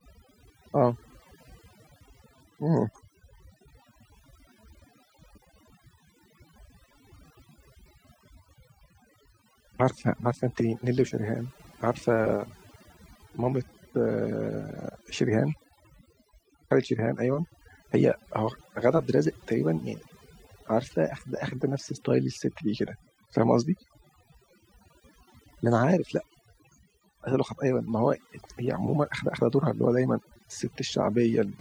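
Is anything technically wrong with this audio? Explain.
Yes. Overdone noise removal runs through the whole speech clip. The noise reduction was set so aggressively that frequency bands near its noise estimate are pulled down or cut entirely, taking quiet speech detail too. The background drops and breaks up into twinkling specks.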